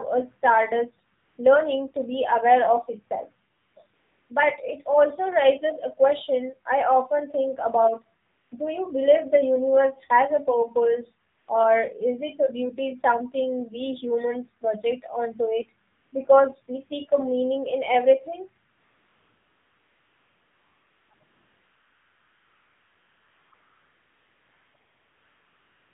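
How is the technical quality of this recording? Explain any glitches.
The quality is poor: the whole recording carries mobile-codec damage, and comfort noise repeatedly replaces the real background.

AMR narrowband mobile codec, throughout: the speech is squeezed into an 8 kHz phone channel, so nothing above 4 kHz survives. Pulse-driven vocal-tract modelling at what sounds like a low rate, around 7.4 kbps, leaves the voice plainly buzzy and synthetic.

AMR comfort noise, eleven times between 1.18 s and the end: short gaps of 0.18 to 0.36 s appear up to 16.1 s. From 18.72 s onward the substitution is almost continuous, with stretches of about 1.2 to 2.4 s and one brief 0.06 s burst. Whenever the phone judged the talker silent, it stopped sending speech and the receiver filled the gap with smooth synthetic noise. That noise switches in and out and may clip quiet word endings.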